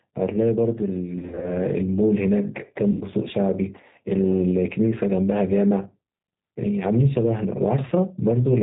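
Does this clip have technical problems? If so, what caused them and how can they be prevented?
Yes. Gain pumping runs throughout: the gain swings by around 5 dB, squashing loud and soft parts closer in level. This is likely an overdriven input gain feeding a fast limiter, not natural room noise. Set input gain lower so the limiter rarely acts.

The G.729 codec, at 8 kbit/s, leaves the speech rough and synthetic with nothing above 4 kHz. Unlike packet loss, this damage is constant rather than bursty. Use a wideband codec such as Opus where the network allows.

VoIP packet loss concealed by the speech codec occurs at 1.19 to 1.58 s, where gaps of up to 40 ms are scattered across the span, and at 2.91 to 3.04 s, where about 100 ms is lost. The decoder stretches the last sound into a fading buzz or coloured noise, and the speech stays weak briefly afterward, unlike a clean dropout's silence. 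Add jitter buffering and forward error correction on a steadier network path.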